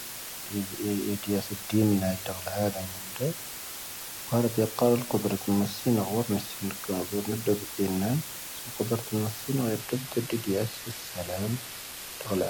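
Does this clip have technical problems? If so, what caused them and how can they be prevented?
Yes. A constant, even hiss sits under the speech throughout, only about 10 dB below it, with no distortion. This is low bit depth with dither: 5-bit quantisation with dither turns the rounding error into steady white noise. Prevent it by recording and exporting at 16 bits or more.

From 9.79 s to the end the treble abruptly thins, with nothing above 14.9 kHz and more codec artefacts, but no gap. This is an adaptive stream at a lower bitrate, which fits a switch from AAC-LC at 96 kbit/s to HE-AAC at 24 kbit/s. Prevent it by keeping a larger playback buffer or a minimum bitrate floor.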